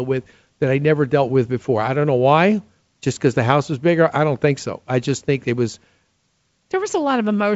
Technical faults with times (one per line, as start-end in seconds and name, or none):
none